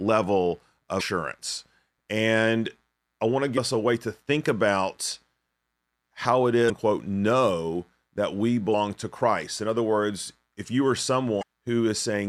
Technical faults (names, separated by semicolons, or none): damaged data in a compressed stream